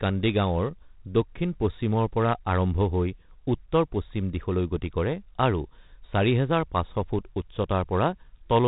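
Speech, carrying 4-bit ADPCM compression from start to finish. Each sample is coded as a coarse 4-bit step away from a predicted value, so a gritty hiss rides on every louder syllable and rises and falls with the level. Abrupt onsets smear and distort because the adaptive step size lags behind them. The damage is heavy, and nothing remains above 3.8 kHz, which dulls the sound and fits a 32 kbps stream at a low sample rate.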